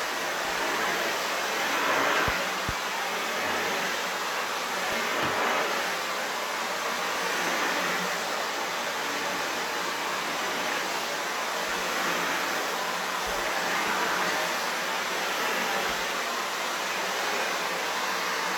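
Two clocks likely drifting apart by around 500 ppm cause clock drift buffer slips, heard as regular clicks every 2.24 s from 0.45 to 18.35 s, about ten in all.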